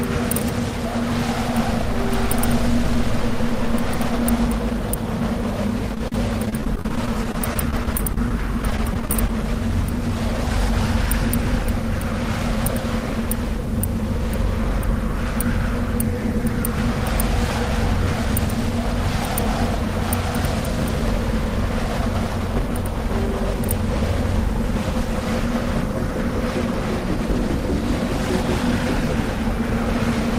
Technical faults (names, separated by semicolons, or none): repeated packet loss (robotic sound); dropped buffer (overrun)